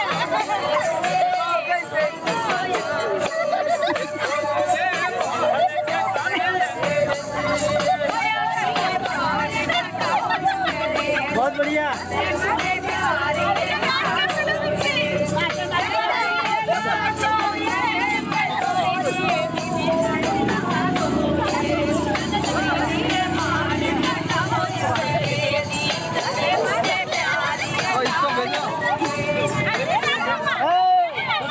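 Across the whole clip the level keeps swinging by around 10 dB. Loud and quiet passages sit unnaturally close together, so the sound feels squashed. This is gain pumping, likely from input gain set far too high and a fast limiter or compressor clamping down on each peak. Nothing above 8 kHz comes through, which fits a wideband call codec.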